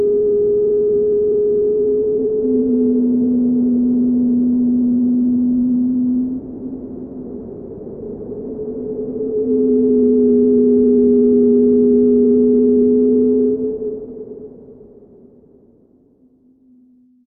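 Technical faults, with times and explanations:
Nothing technical stands out here; the sound comes through without any fault worth flagging.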